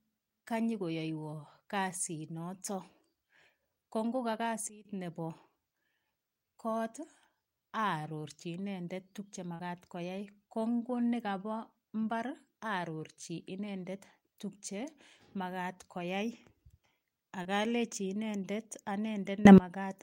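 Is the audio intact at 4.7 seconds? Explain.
No. Just after "ko ngoka", a sudden gain jump drops the speech and its background noise together by about 16 dB from 4.69 to 4.85 s, likely a gain setting applied without a ramp. The waveform shows an abrupt step down, and the spectrogram dims uniformly across all frequencies.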